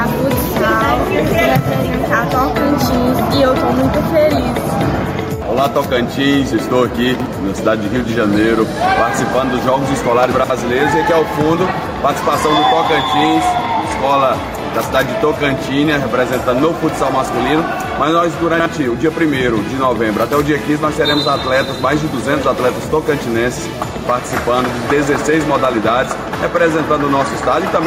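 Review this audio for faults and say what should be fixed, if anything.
Gain pumping runs through the whole clip. The input gain was likely set far too high for the microphone, so a fast limiter or compressor clamps down on every loud sound and lets go in the gaps. The level swings by around 5 dB. Loud and quiet passages sit unnaturally close together and the sound feels squashed. To prevent it, lower the preamp gain so peaks sit well below the limiter threshold, and use slower attack and release settings.

Chunks out of order appear at 7.14 to 7.26 s, 10.32 to 10.5 s and 18.54 to 18.66 s. In each case a 60 ms block of audio was delivered or written late and played after blocks that should have followed it. It was one block late at 7.14 and 18.54 s, and two blocks late at 10.32 s. No audio is missing, but each spot has a jumbled moment with hard joins. To prevent it, reorder blocks by sequence number or timestamp in a jitter buffer before playback or writing.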